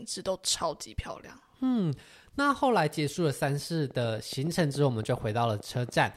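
Something in the chain, likely interference from nearby equipment or a faulty connection or power supply, begins injecting a regular pulse at 3.91 s and keeps it up until 6.04 s. The result is a train of clicks, about 15 in all, arriving at a steady 7.1 per second. Each click has much the same shape and reaches roughly the level of the speech itself, so the ticking sits on top of the talking and stays audible through the pauses as well.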